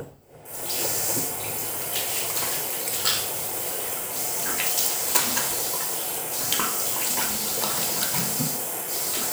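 No technical faults can be heard anywhere in the audio.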